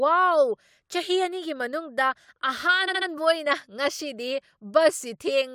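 Speech that stutters from 2.87 to 3.08 s, where a 70 ms stretch plays three extra times. These are repeated frames, which lengthen the audio by 0.21 s.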